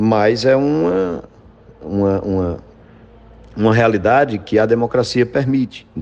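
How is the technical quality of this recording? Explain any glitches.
There are no glitches to explain in this recording.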